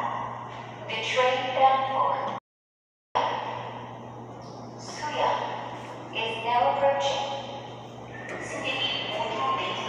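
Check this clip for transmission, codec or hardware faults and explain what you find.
One transmission fault stands out: an audio dropout to silence. From 2.38 s to 3.15 s the sound stops dead and returns just as abruptly. The gap lasts about 0.77 s. It is silence, with no background or room tone underneath. The input signal was likely lost for that stretch, through a broken link or a briefly disconnected or muted source, while recording carried on writing silence. Whatever sounded during those 0.77 s is gone.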